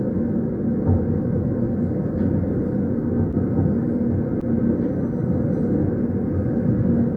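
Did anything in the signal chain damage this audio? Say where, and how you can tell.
Yes, the damage happens at the network stage, with the decoder covering for it. There's short concealed packet loss at 3.31 to 3.35 s and again at 4.41 to 4.55 s. Each time a 20 ms chunk never arrived, and the receiver extrapolated from the last good audio, 13 ms and 11 ms of it, before crossfading back in. You hear it as a quick smear or wobble, and the second one also stretches things by roughly 10 ms.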